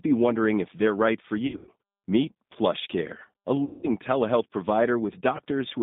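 The whole clip runs through a G.729 codec at 8 kbit/s, so the speech sits in a narrow band of roughly 150 Hz to 3.7 kHz and has that plainly rough, slightly synthetic edge you get from rebuilding speech out of a filter and a few pulses per frame.

Then there's VoIP packet loss concealed by the speech codec, three times. The first runs from 1.47 to 1.71 s, right after "if they're right for". About 160 ms goes missing in bits scattered over 200 ms, the longest gap 100 ms. The decoder stretches the last sound into a buzzy tone or coloured noise that fades. Next comes 3.65 to 3.89 s, about 180 ms lost, with the same smeared decay and weak recovery. Last is a brief 20 ms hiccup at 5.37 to 5.40 s.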